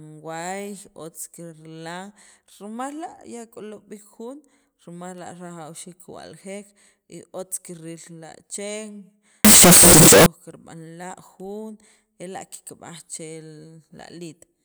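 At about 9.45 s the speech suddenly turns into a blast of harsh, very loud distortion that lasts until roughly 10.26 s, and even the quiet bits in that stretch come out as loud as everything else. That's the classic sound of signed and unsigned mixed up, likely from 16-bit samples being read with the wrong sign convention. Flipping the top bit turns every zero crossing into a leap across the whole range, hence the wall of noise.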